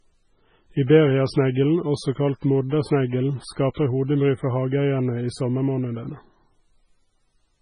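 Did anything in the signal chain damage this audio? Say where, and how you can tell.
Yes, at the codec stage. The speech has nothing above 10.3 kHz, and heavy watery, swirling artefacts run throughout. That points to MP3 compression, likely at a very low bitrate around 16 kbps. Short of bits, the encoder cut the treble and dropped weak frequency lines frame by frame.

Pre-echo appears from 3.74 to 3.77 s. A short hiss of about 30 ms comes just before a sharp attack, and the attack sounds smeared. The codec spread noise sized for the loud onset across its whole block, into the quiet moment before it.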